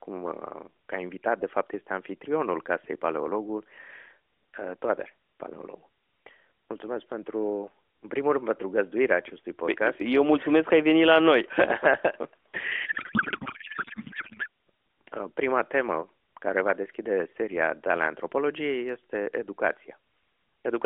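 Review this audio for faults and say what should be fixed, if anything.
Codec payload misread, 12.86 to 14.48 s: the speech collapses into garbled noise and warble that barely tracks it, against the light, band-limited AMR narrowband sound elsewhere. This fits octet-aligned AMR frames being unpacked as bandwidth-efficient, so every field lands in the wrong place. To prevent it, make both ends negotiate and enforce the same AMR payload format.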